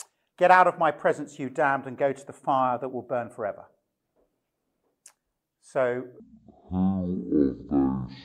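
Stereo read as mono takes over from 6.2 s to the end of the clip at 8.25 s. From that point the left and right samples, which alternate in the stream, are being played back one after another as if they were a single channel, so every stereo frame occupies two sample slots. The sound drops to half speed and falls a full octave, 12 semitones, and a fainter mirrored copy of it shows up in the upper half of the spectrum.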